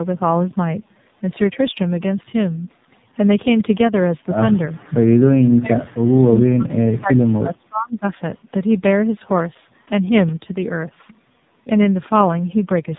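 From start to end, the speech carries tandem speech coding. The sound points to two speech codecs in a row, consistent with iLBC and then AMR-NB, with a G.711 link between them. Each coder had to re-encode the damaged output of the one before. Errors stack up. The speech sounds rough and muffled, with a watery warble. Nothing is left above 3.8 kHz.

From 5.42 to 8.04 s, the speech is suppressed in double talk. The level drops hard, at worst by about 35 dB. It dips, thins and breaks up in pieces for roughly three seconds. The likely cause is an echo canceller that heard the far side talking at the same time. It could not tell this talker from the loudspeaker echo, so it turned both down.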